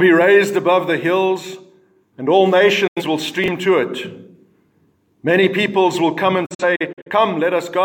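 At 2.87 to 3.02 s a digital broadcast dropout mutes the audio with a quick 8 ms fade, losing about 85 ms, which fits two failed frames. At 3.44 to 3.48 s, chunks out of order swap a 20 ms piece one slot late, heard as a brief jumbled moment rather than a silent gap. A second dropout, from 6.46 to 7.10 s, leaves several short holes totalling 213 ms, the longest 43 ms.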